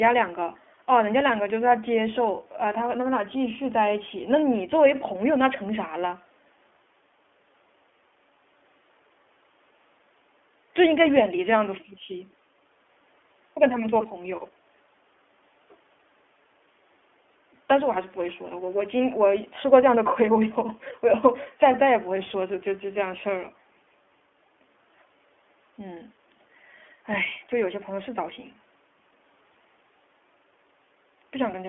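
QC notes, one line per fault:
throughout, iLBC codec: content stops sharply near 3.4 kHz and thins below 300 Hz. Each 20 ms frame is coded separately, giving a plainly rough, synthetic edge, which fits the 15.2 kbps mode. On a spectrogram, the empty band above the cutoff shows clearly.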